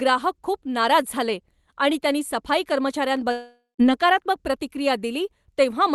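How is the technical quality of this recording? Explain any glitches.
The speech has one glitch, heard over audio that tops out near 12 kHz, which fits an Opus call codec at about 32 kbps.

From 3.31 to 3.81 s there is a gap of about half a second, most likely a long network dropout: no packets arrived, so the receiver stretched the last sound into a fading buzz, then fell to silence for roughly 150 ms before speech resumed with that stretch lost. A single lost packet would leave only a brief smear, and a plain mute would go silent at once rather than decaying first.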